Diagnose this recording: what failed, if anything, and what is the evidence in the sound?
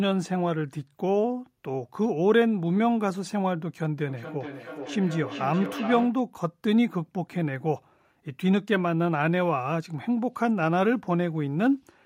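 Feedback echo between two devices, at the call-processing stage. From 4.09 to 6.26 s the speech comes back at an interval of roughly 0.4 s. The loudest repeat sits about 11 dB below the speech. Two devices in the same room share the call. One plays what the other's microphone sent, and that microphone picks it up again. Each echo canceller removes only its own device's playback, so this loop goes unchecked.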